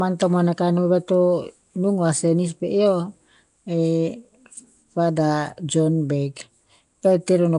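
Speech throughout, and the whole thing carries that rough, hissy halo with a smeared, underwater feel that points to Nellymoser compression, likely the old Flash microphone codec at work. It chops the signal into short blocks and spends a fixed, very small number of bits on each. Quieter bands end up filled with noise rather than real detail, which is where the grit comes from. The damage is plainly audible, nothing survives above about 10.6 kHz, and the density of the artefacts fits a bitrate somewhere around 44 kbps.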